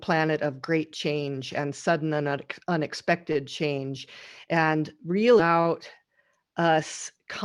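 At 5.39 to 5.42 s the speech jumps abruptly with a brief blip, likely a stream segment skipped; a spectrogram shows a sharp vertical broadband seam there.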